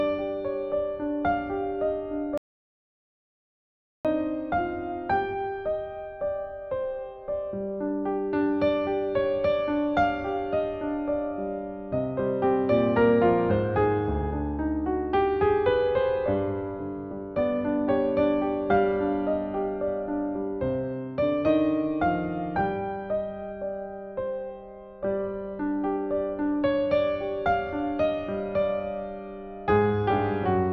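At 2.38 s the sound cuts off abruptly into dead silence, with no room tone, and resumes mid-flow at 4.05 s, losing about 1.67 s of audio. This audio dropout to silence likely came from a lost input while the recorder kept writing silence.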